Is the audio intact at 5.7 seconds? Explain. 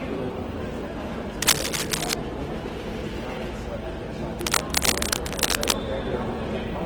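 No. At 5.7 seconds the audio is inside a burst of cable scratch noise that runs from 4.39 to 5.79 s. It is likely caused by a worn cable, connector or control being moved, so that its contact resistance jumps about rapidly. That unsteady contact injects dense, irregular bursts of noise, heard as scratching and rustling that sits somewhat louder than the sound itself, roughly 5 dB above it.

The whole clip, this moment included, also carries Opus compression damage. The likely cause is an encoder starved of bits and running in its music mode, which fits a low rate around 16 kbps. With too few bits, it fills the bands it cannot code properly with folded copies of lower bands or with noise. Tonal parts of the sound therefore come out plainly grainy, rough and noisy instead of clean.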